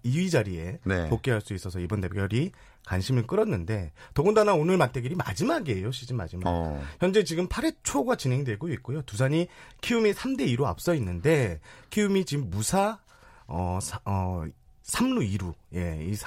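No technical faults are audible.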